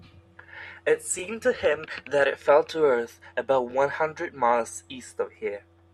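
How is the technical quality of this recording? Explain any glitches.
Two brief stutters break the speech, at 1.19–1.21 s and 3.71–3.73 s. These are overlapping chunks: each 2.5-second chunk starts 20 ms early, so that sliver plays twice at every join.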